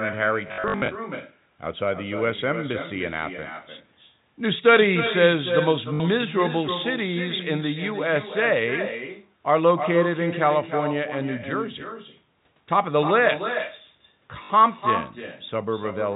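Telephone speech carries an echo with no canceller throughout. Every phrase returns about a third of a second later, roughly 8 dB quieter and thinner. The far end is playing the call through a loudspeaker, its microphone picks it up, and nothing strips it out before it travels back. Packet loss with the last packet repeated causes robotic stutters. From 0.48 to 0.88 s, about 260 ms goes missing in short gaps, the longest 60 ms. Brief stutters follow at 5.94 to 6.0 s and 14.44 to 14.5 s. Each gap is filled by replaying the previous packet. Runs buzz at a rate that fits 20 ms packets. The band stops at 4 kHz, as G.711 telephone coding does.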